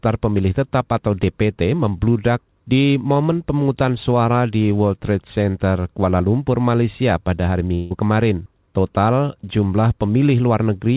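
Speech over a call path. The band stops at 4 kHz, which fits a G.711 telephone codec. From 7.74 to 7.97 s there is a long network dropout, likely caused by packets that never arrived. For about 160 ms no real audio reaches the listener. The receiver stretches the last sound into a fading buzz or hiss to cover the gap. There is no fall to silence. When the speech returns, about 15 ms of it is simply gone.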